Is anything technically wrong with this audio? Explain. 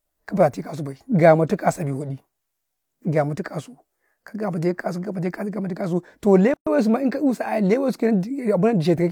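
Yes. At 6.54 to 6.67 s there is a gap at a join of encoded pieces. The speech stops dead for about 128 ms, then resumes where it left off. Separately encoded pieces were joined untrimmed, keeping encoder delay and end padding. Codec smearing softens the abrupt edges.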